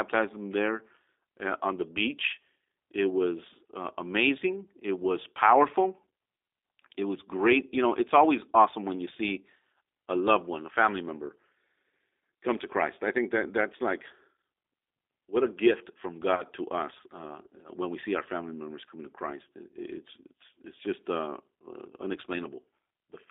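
Throughout, the speech carries the plainly audible damage of the G.729 codec at 8 kbit/s. Nothing passes outside roughly 300 Hz to 3.7 kHz, and the voice has a rough, slightly synthetic grain from being rebuilt out of a few pulses per frame. A simple band-limited line would sound muffled but clean, not grainy like this.

From 16.35 to 16.43 s, just before "to us uh", VoIP packet loss concealed by the speech codec stretches the last sound into a brief buzzy tone or coloured noise that fades. About 30 ms of audio is missing, which points to a single lost packet. The voice stays weak or distorted for tens of milliseconds or more after it. A dropout would leave silence or a click instead.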